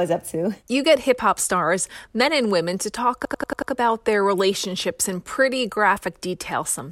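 Right after "and women to talk", from 3.25 to 3.72 s, there's a system hang loop: the driver stalled and the hardware kept replaying one 93 ms chunk, which fits a 4096-sample buffer, five times over. It's a machine-gun stutter at about 10.8 Hz before "their relationships in pretty".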